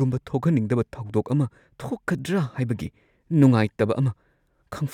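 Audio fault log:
0.40–4.11 s: clock drift buffer slips, about four clicks 1.24 s apart, likely two clocks about 300 ppm apart dropping or repeating some 15 samples.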